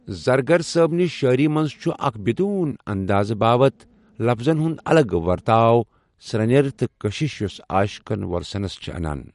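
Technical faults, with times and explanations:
throughout MP3 compression: nothing is heard above 11.2 kHz, and s sounds have a watery, swirly texture, likely from MP3 encoding at a bitrate around 48 kbps. Weak frequency lines drop in and out between frames, which a plain low-pass filter would not cause.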